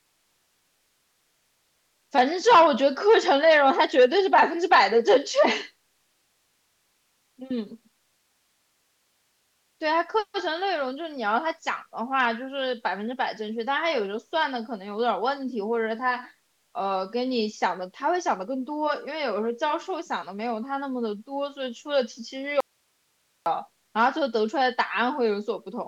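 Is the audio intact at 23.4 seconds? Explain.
No, 23.4 s falls inside an audio dropout to a faint residue running from 22.60 to 23.46 s. The speech cuts out abruptly for about 0.86 s, leaving only hiss roughly 45 dB down, likely because the signal was lost while the path stayed live.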